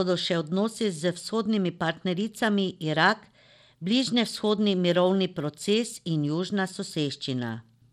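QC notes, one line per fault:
Throughout: Bluetooth SBC compression. The speech has a dull, flickering treble with gritty noise and aliasing riding on it. This likely comes from SBC coding with a small bit pool, which fits about 96 kbps, leaving the upper sub-bands starved of bits and the rest coarsely quantised.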